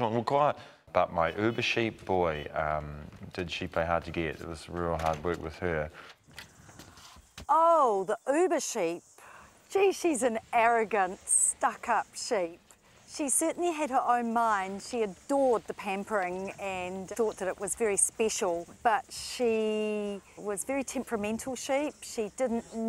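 No technical faults are audible.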